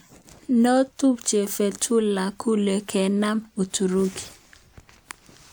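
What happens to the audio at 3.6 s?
Nothing goes wrong at 3.6 s: the speech runs through that moment intact, with no dropout, click or other fault.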